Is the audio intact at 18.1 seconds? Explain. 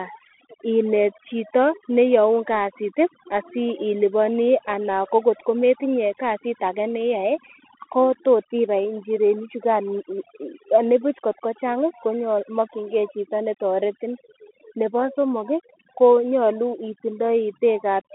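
No. At 18.1 s you're hearing two things that run the whole clip. First, overdone noise removal: the reducer clamps down hard on any frequency band sitting near its noise guess, so the background drops and breaks up into little twinkling specks.

Second, the Bluetooth CVSD headset codec: each sample just nudges the signal up or down by an adaptive step, which fits a 64 kbps stream. The line sits roughly 250 Hz to 3.4 kHz with nothing past 3.8 kHz, s sounds get scratchy, and there's a granular hiss underneath.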